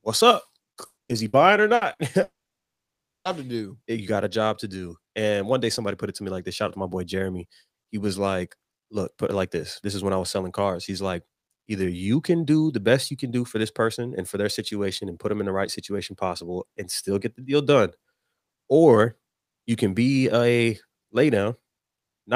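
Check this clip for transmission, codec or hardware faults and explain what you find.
Network transmission faults damage the opening seconds of this speech.

A burst of packet loss occurs five times: 0.85 to 1.00 s, right after "what's up", then at 1.03, 1.27, 1.75 and 1.93 s. The receiver conceals each lost stretch by extending the last sound and fading it, so it becomes a brief buzz or hiss. The first gap covers about 120 ms and ends in a short silence. The later ones cover about 60 ms each. After each gap the speech jumps ahead.

A long network dropout, the likely cause, runs from 2.23 to 3.28 s, just before "to do". A brief concealed tail fades into roughly a second of silence, and about a second of speech is lost.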